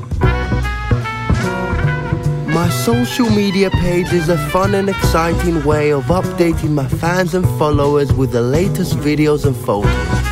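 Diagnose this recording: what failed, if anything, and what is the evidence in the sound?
Nothing failed in this recording, and the sound shows no evidence of a fault at any stage.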